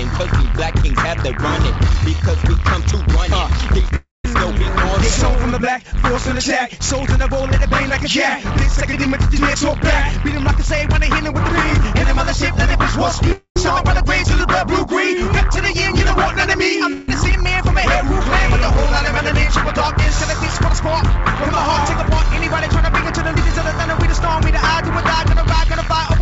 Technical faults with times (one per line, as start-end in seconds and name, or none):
3.96-4.25 long network dropout
13.32-13.57 long network dropout
16.93-17.09 long network dropout